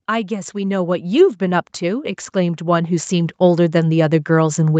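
From 0.29 s to the end of this speech clip at 4.79 s, the voice and the background swell upward together, steadily growing louder. This is automatic gain rising: the gain control judged the input too quiet and kept raising its gain gradually. Throughout, the sound stops near 8 kHz, as expected from a call codec.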